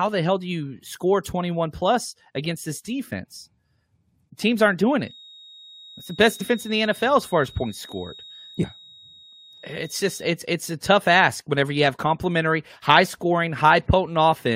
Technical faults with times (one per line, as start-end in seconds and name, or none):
4.97-10.38 feedback whistle
6.40-6.42 compressed frames skipped
8.63 compressed frames skipped